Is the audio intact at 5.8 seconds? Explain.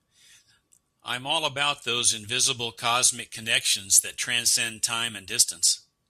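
Yes, at 5.8 seconds the speech plays through with no audible fault.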